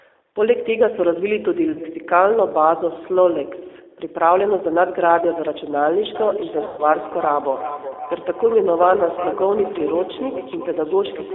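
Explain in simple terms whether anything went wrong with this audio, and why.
Yes, three things went wrong with this speech, and each sounds different.

The whole recording passed through the G.729 codec, a phone-call compressor that rebuilds the voice from a simplified model of the mouth and throat rather than sending the real sound. That is why everything sounds slightly rough and artificial, and why nothing is heard below about 300 Hz or above about 3.6 kHz. Unlike ordinary muffling, the damage here is that synthetic, rebuilt quality, and it is plainly audible throughout.

Twice, VoIP packet loss concealed by the speech codec interrupts the voice. A small piece of the call never arrived, and the decoder filled the gap by stretching the last sound it had, fading it out. Around 1.73 to 1.81 s a single short chunk goes missing. Around 6.66 to 6.83 s a longer gap leaves a stretched, smeared sound that stays weak briefly afterwards. 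A plain dropout would be silence, but these gaps are filled with sound instead.

From 6.15 s to the end there is feedback echo between two devices. Two phones or computers on the same call were in one room, so each picked up the other's loudspeaker. Every bit of speech comes back roughly 0.4 s later, thinner and tinnier. A room's natural reverberation would blur the sound instead of returning it as distinct, evenly spaced repeats.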